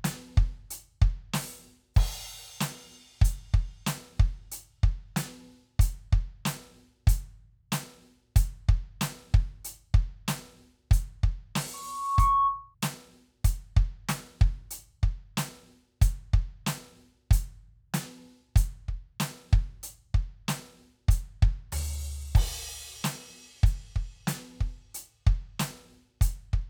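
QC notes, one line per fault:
11.73–12.75 s, loudspeaker feedback squeal: a single tone at 1.1 kHz rises out of the music over about half a second and sits at roughly the same level as the music for about half a second. The mic is hearing its own speaker, and at that frequency the loop gain tops one, so the tone keeps feeding itself until the amplifier limits it or the loop is broken.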